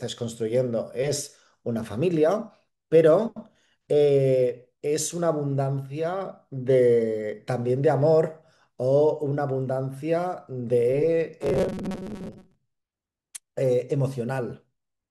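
From 11.42 to 12.55 s the speech turns into a rigid, metallic buzz locked at about 188 Hz, still loosely tracing the syllables. This is robotic sound from repeated short buffers, likely caused by audio arriving too late, so the playback loops a fragment of roughly 5.3 ms (one over 188 Hz) to fill the gaps. About half of the sound in that stretch is these repeats rather than real audio.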